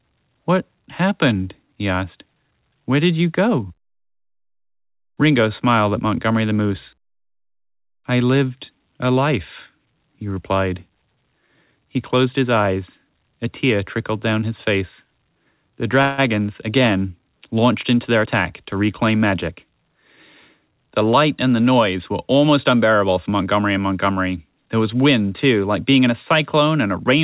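A speech recording that has passed through a call path carries two timing faults. The G.711 A-law coding at 64 kbps leaves nothing above 4 kHz, so the spectrogram shows a flat ceiling there. From 16.02 to 16.2 s there is a call audio freeze. For about 160 ms the last sound is held as a fading buzz or hiss instead of breaking off. This likely comes from delayed packets draining the jitter buffer. The waveform shows a smooth, decaying repeated texture, and the spectrogram shows horizontal smeared bands. Speech then resumes at "again launched into" with nothing lost, just later. After those words, from 18.15 to 19.93 s, a jitter buffer speed-up trims the built-up delay. Short pitch-period pieces are cut repeatedly, roughly 150 ms in total, so speech runs at about 109% with unchanged pitch. On the spectrogram, harmonics keep their spacing while syllables sit visibly closer together.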